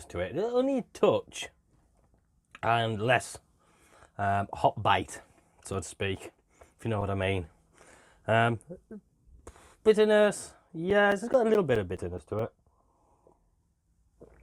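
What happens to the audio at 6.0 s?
At 6.0 s the sound is broken by a run of sharp little ticks, about five a second, each only a few milliseconds long. These are CD scratch ticks, running from 4.88 to 7.65 s: a blemish on the disc wipes out more data than error correction can rebuild once per revolution, so the player patches or briefly silences those samples.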